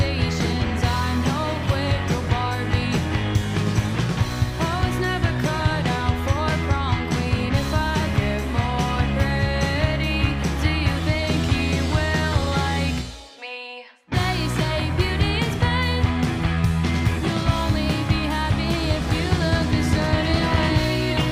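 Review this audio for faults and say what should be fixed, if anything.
No faults found; nothing needs fixing.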